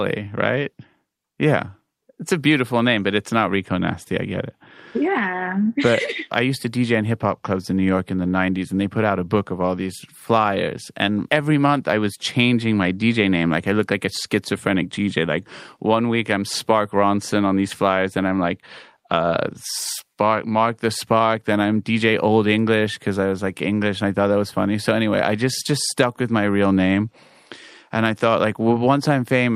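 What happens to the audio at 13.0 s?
Nothing goes wrong at 13.0 s; the speech runs through that moment intact, with no audible fault.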